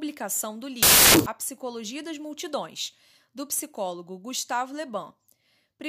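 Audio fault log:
0.83–1.26 s, samples built from the wrong bytes: the speech gives way to loud, harsh broadband noise for about 0.43 s. Each sample's bytes are read out of order or misaligned. The fast-changing low bits become the large part of every value, which sounds like hiss.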